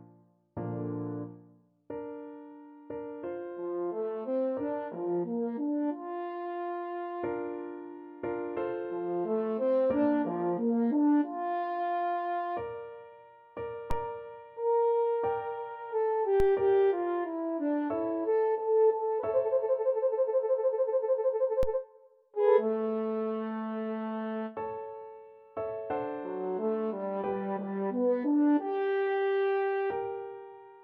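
Three DC steps hit the audio at 13.91, 16.40 and 21.63 s. Each jumps the zero line by about -21 dBFS and is heard as a low thump. A 5 Hz high-pass then drains it away.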